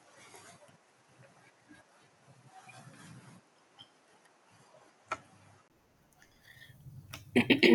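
Input switched to a poorer device, from 0.0 to 5.70 s: for this stretch the speech sounds duller, with nothing above about 11.3 kHz, and carries faint background noise sitting roughly 45 dB below the signal. The likely cause is the recording running through a lesser microphone before moving to a better one. At 5.70 s a brief silence of about 20 ms marks the change. The high end then opens up, while the loudness stays much the same.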